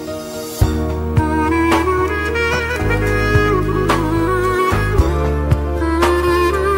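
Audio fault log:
5.09–6.78 s, drift correction step: At 5.09 s the sound suddenly runs faster and higher. Speed rises by 5.67% and pitch by 95.4 cents, close to a semitone. Speed and pitch move together, so this is a change in playback rate, not a pitch effect. The shift holds to the end of the clip and never snaps back. The likely cause is clock-matching software changing the playback rate in one step to drain or refill its buffer.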